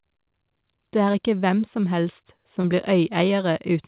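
At 1.12 to 1.16 s, just before "hvem som helst", and again at 2.62 to 2.66 s, right after "hvem som helst", short concealed packet loss leaves a brief smear where roughly 20 ms of audio went missing. The decoder extended the preceding sound and blended back in rather than leaving silence, so it sounds like a soft wobble, not a hard dropout or click. All of this sits within the 4 kHz band of a G.711 call line.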